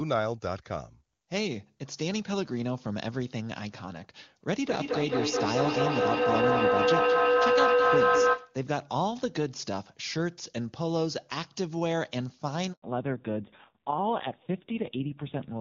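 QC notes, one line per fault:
4.57 to 8.63 s, feedback howl: A tone builds to about 6 dB above the speech level, with repeats roughly 200 ms apart. Two devices in the same room appear to share the call. The microphone picks up the other device's loudspeaker, and each trip round that loop adds gain, so the repeats grow. The loop favours a band near 500 Hz, and the sound narrows to that howl until the loop is broken at 8.63 s.
12.72 s, handover gap: The audio drops out for 100 ms and the sound dies away quickly into silence. This is the call being passed from one network to another. No speech frames arrived while the link switched over, so the decoder had nothing to play, and whatever fell inside that window is gone.
12.82 to 15.61 s, fallback to narrowband: Immediately after the gap, the bandwidth collapses. Nothing remains above 4 kHz, and the sound turns dull and rough. Up to this point the wideband coding is clean, which fits AMR-WB at a high rate such as 23.85 kbit/s. 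The call has dropped to an older narrowband codec, and the coarse, raspy texture points to a low AMR-NB rate around 5.9 kbit/s.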